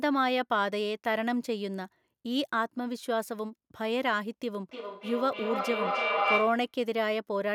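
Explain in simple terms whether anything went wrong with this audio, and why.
From 4.71 to 6.75 s there is feedback echo between two devices. The speech comes back again and again at roughly a third of a second apart, each repeat thinner and more ringing, and the repeats build up until they are as loud as the speech itself instead of fading. This happens when two devices in the same room join one call: one plays what the other's microphone sent, that microphone hears it again, and neither echo canceller can remove sound coming from the other device.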